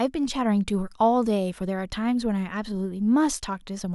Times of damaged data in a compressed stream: none

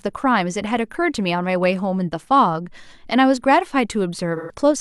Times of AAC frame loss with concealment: 4.36-4.54

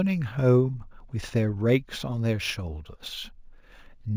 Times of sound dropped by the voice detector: none

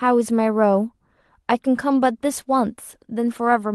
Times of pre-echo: none

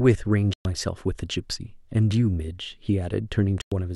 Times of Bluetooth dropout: 0.53-0.65, 3.61-3.72

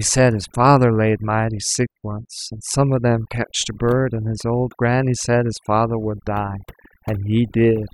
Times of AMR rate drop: none

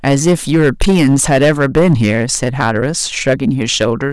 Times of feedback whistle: none

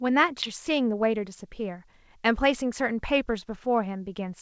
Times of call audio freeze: none

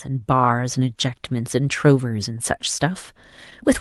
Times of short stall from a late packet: 0.96-1.00

